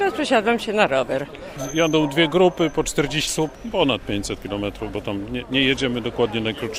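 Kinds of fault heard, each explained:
Skip ahead: at 3.27 to 3.29 s the audio jumps forward with no gap, losing about 0.7 s of sound as queued audio was dropped.
Jitter buffer speed-up: from 3.39 to 4.97 s the sound runs about 7% fast at unchanged pitch, as the buffer trimmed roughly 0.1 s of short pitch-period pieces.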